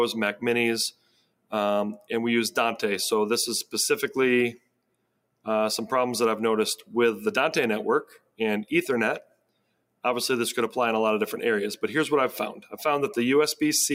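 A noise suppressor built for speech was left on throughout, so the noise suppressor is applied to music or sounds. It treats steady, sustained material as noise, and the level swings by roughly 10 dB, giving a pumping, fluttering quality as held parts sink.

At 0.91–1.52 s, 4.55–5.47 s, 8.05–8.40 s and 9.22–10.04 s, the sound is cut by the noise suppressor much harder than elsewhere. Each time it drops by about 21 to 22 dB, so the sound briefly sinks and fades before recovering.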